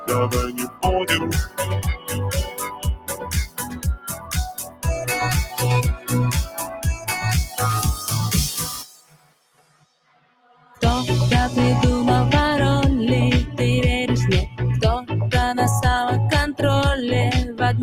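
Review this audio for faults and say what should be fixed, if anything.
Throughout the clip the level pumps and flutters, and held sound and decaying tails thin out while sharp onsets stay fairly intact. This is a noise suppressor applied to music or sounds. A suppressor tuned for speech treats steady tones, ambience and reverb as noise and keeps pulling them down, so its gain swings by roughly 20 dB as the material changes, which gives the unstable, breathing character.

In eight places the sound sinks noticeably or its decay is cut short: 0.49–0.85 s (about 16 dB down), 1.46–1.65 s (about 15 dB), 1.95–2.15 s (about 13 dB), 2.44–4.36 s (about 16 dB), 4.55–4.86 s (about 17 dB), 5.96–6.11 s (about 11 dB), 6.46–7.09 s (about 9 dB) and 8.72–10.82 s (about 17 dB). These are sounds cut by the noise suppressor. It judged these sustained or fading stretches to be noise and attenuated them harder than their surroundings. 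The longest cuts are near 2.4–4.4 s and 8.7–10.8 s.

To prevent this, disable the speech noise suppressor, or switch it to a music mode, whenever the source is anything other than speech.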